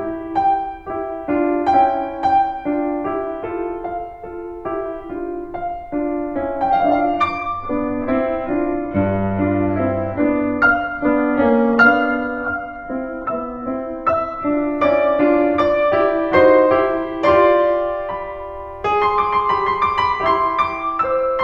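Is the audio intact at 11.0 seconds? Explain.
No. At 11.0 seconds the music is partway through an adaptive stream at a lower bitrate, lasting from 6.70 to 14.70 seconds. The stream dropped to a lower-quality version for those 8 seconds, likely because the connection slowed. The switch is sudden and leaves no gap. Nothing above 10.4 kHz remains, so the treble drops. Codec artefacts rise, which fits a very low-bitrate HE-AAC stream.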